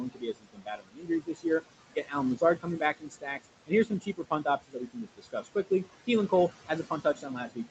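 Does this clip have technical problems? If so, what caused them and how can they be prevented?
Yes. Noise suppressor artifacts run through the whole clip. The suppressor lowers whatever bands it judges to be steady noise, frame by frame, pulling the room noise down by about 20 dB between phrases and letting it rise again under the speech. On a spectrogram the noise floor looks blotchy, with isolated specks and gaps, and it dips in the pauses. Using a quieter room or a milder suppression setting would prevent it.

Speech cut by the noise suppressor happens at 0.0–1.45 s, 1.9–2.15 s, 2.36–3.47 s, 3.67–5.89 s and from 6.68 s to the end. The suppressor mistook soft speech for noise and turned it down by about 19 to 22 dB. This affects roughly a second in the first and fourth spans, about a fifth of a second in the second, and about half a second in the third, so consonants and endings sound swallowed. 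The waveform shows sudden hollows in the speech envelope, and the spectrogram shows harmonics and fricative energy fading out in patches. A less aggressive suppressor, or one tuned to protect speech, would prevent this. The room noise sits about 12 dB below the speech, and the spectrum is empty above 8 kHz, which fits the call path's bandwidth.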